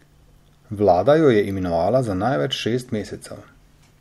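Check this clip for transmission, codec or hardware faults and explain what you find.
Nothing wrong turns up here; the speech comes across steady and intact, with nothing pointing to a problem in the transmission, the encoding or the hardware.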